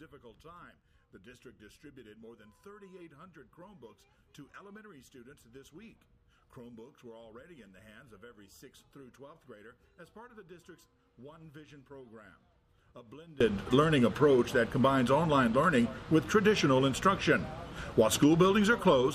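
From 0.0 to 13.4 s the audio drops by about 26 dB and turns faint, likely from one channel inverted, cancelling shared content when summed to mono.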